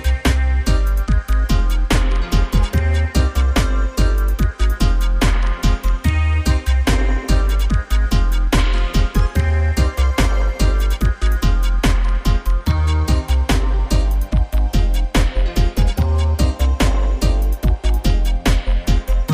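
No technical faults can be heard anywhere in the recording.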